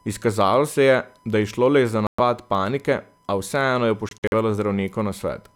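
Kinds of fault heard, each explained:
USB whine: A steady 1 kHz tone sits under the speech for the whole clip, about 40 dB below it. The USB bus draws current in 1 ms frames. That pulsing leaks in through power or ground as a fixed pitch.
Bluetooth dropout: The audio cuts to silence from 2.07 to 2.20 s. After "a vseeno je", from 4.09 to 4.33 s, it breaks into scattered short holes, the longest about 46 ms. Packets likely arrived too late. Playback resumes as if it had continued.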